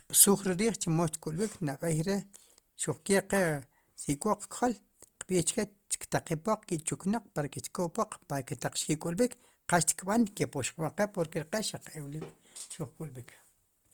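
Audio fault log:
throughout, Opus compression: the speech sounds rough and grainy, likely from Opus music-mode coding near 24 kbps. Starved bands are filled with folded or noise content, so a spectrogram shows few holes and energy up to 20.1 kHz, but the harmonics look speckled and smeared.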